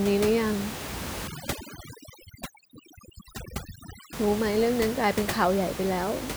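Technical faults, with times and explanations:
1.27–4.13 s, overdone noise removal: the room noise, about 10 dB below speech elsewhere, drops and breaks up into twinkling specks. An over-strong noise reducer is cutting single frequency bands near its noise estimate, stripping quiet speech detail.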